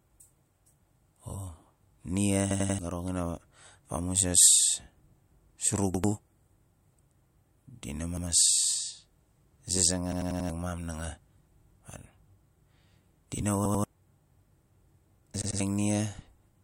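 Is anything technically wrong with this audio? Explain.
Yes. A repeated buffer fault occurs at 2.51, 5.94, 8.17, 10.12, 11.61, 13.65 (just after "di na") and 15.42 s. When fresh audio arrived late, the same 93 ms chunk, which fits a 4096-sample buffer, replayed one to four times. Each instance is a hard-edged stutter, and the longest, at 10.12 s, drops roughly 0.4 s of speech.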